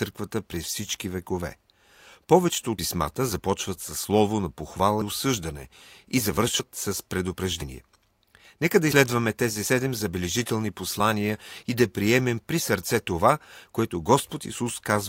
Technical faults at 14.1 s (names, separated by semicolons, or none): none